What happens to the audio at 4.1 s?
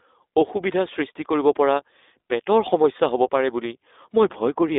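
At 4.1 s the speech is still passing through the iLBC codec, as it does for the whole clip. Everything above about 3.8 kHz is gone. The band runs roughly from 300 Hz to 3.7 kHz, so the sound is thin and boxy. The codec codes each 20 ms frame on its own, without drawing on the one before. That leaves a plainly audible rough, synthetic grain. The coarseness fits a rate near 15.2 kbps.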